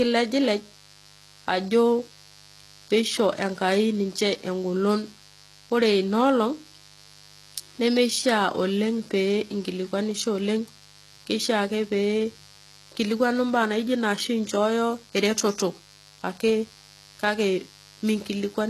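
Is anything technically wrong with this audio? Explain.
Yes, two faults run through the whole speech clip.

A mains buzz at 50 Hz sits around 25 dB below the speech. Twice-per-cycle switching spikes spread harmonics upward, giving a raspy buzz and evenly spaced horizontal lines on a spectrogram.

The treble is gritty and lispy, with nothing above 12.3 kHz, and the spectrogram shows a hard ceiling there. This is likely heavy HE-AAC compression at a very low bitrate, with a rebuilt upper band whose harmonics fail to line up.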